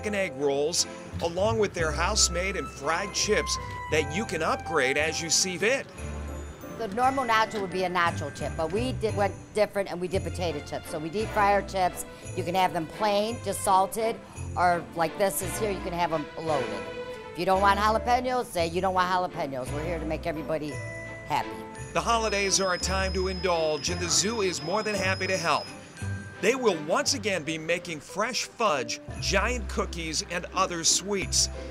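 At 5.61 s, again from 9.09 to 9.11 s, and at 28.68 s there are short glitches from damaged data in the compressed stream. The decoder hits corrupted frames, loses sync and hunts for the next good header.

At 21.91 s there's a tiny skip, likely a dropped buffer (overrun): the samples got overwritten before being read, so around 10 ms vanished and the two sides were butted together. A bigger one at 31.22 s loses around 30 ms and is heard as a jump.

From 22.15 to 25.78 s a thin, steady whistle near 5.1 kHz sits about 15 dB under the sound, wavering a bit in level. That's likely a feedback whistle, with the speaker-to-mic loop hovering right at the edge of feedback so one tone rings without taking off.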